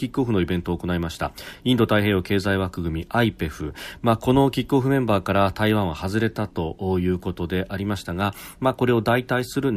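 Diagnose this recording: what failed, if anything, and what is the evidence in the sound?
Nothing failed; no faults audible.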